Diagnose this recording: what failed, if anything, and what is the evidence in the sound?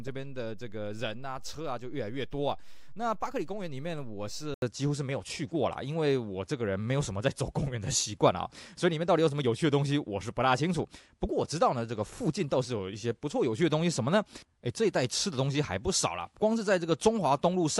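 Input switched to a poorer device at 4.54 s, lasting to the end: after an 80 ms silence the sound loses everything above 11.4 kHz, shifts level by around 5 dB and gains a new noise floor roughly 50 dB down, likely a driver-level change of capture device.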